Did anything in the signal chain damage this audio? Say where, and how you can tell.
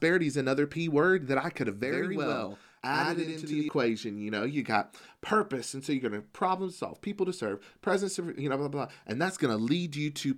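Yes. From 1.84 to 3.69 s, just after "that I could have", the speech gains an equal-level slap copy 93 ms late. This is channel delay (doubling) at the driver or buffer stage: one channel lagged, consistent with a 4096-sample buffer, before the mono sum.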